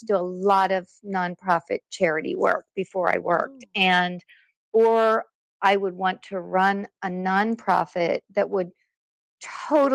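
No technical faults can be heard in the audio.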